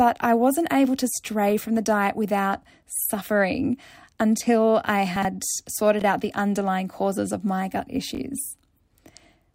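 A brief jumbled, garbled stutter is audible in this speech at 5.16 to 5.25 s, and more briefly at 6.00 to 6.04 s and 8.15 to 8.19 s. These are chunks out of order: blocks of about 21 ms each play late, three blocks behind at 5.16 s and one behind at the other two. Nothing is missing, but each swap creates hard joins.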